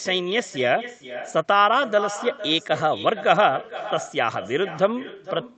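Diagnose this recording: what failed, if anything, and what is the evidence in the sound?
Echo with no canceller, at the call-processing stage, runs through the whole speech clip. Every phrase is followed by a second, fainter copy about half a second later, sitting about 14 dB below the direct speech. The copy sounds thin. The far end is playing the call on a loudspeaker, and its microphone captures that sound. No echo canceller removes it, so it returns over the network. The echo rides through the Opus path, whose band tops out near 8 kHz.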